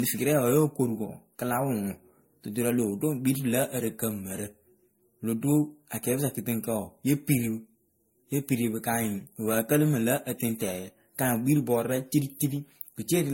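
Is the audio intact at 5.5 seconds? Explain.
No, generation loss is present at 5.5 s and throughout: likely around seven successive MP3 passes near 70 kbit/s, each requantising afresh, leaving swirly, hollow, smeared speech with blurred attacks and nothing above 16.5 kHz.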